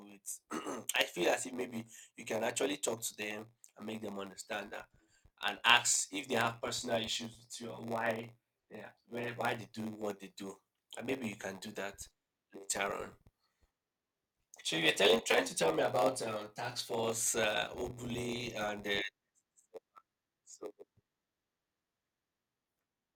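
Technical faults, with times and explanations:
Throughout: block size mismatch (padded). A steady buzz at about 93.8 Hz runs under the speech, and everything plays slower than it should, at 0.938 times normal speed, while the timbre stays. One stage hands over blocks shorter than the next stage reads, and each shortfall is filled with silence. These tiny regular gaps produce the buzz at the block rate, which fits a 512-sample read block.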